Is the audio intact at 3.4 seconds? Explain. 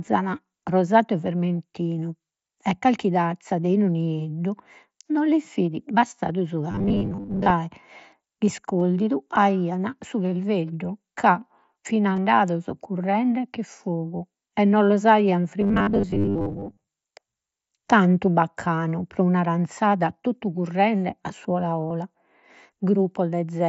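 No. At 3.43 s, between "e vermentinu e calchi" and "de 'inu nieddu no", concealed Bluetooth headset packet loss fills about 15 ms with repeated recent waveform, a brief buzzy tone.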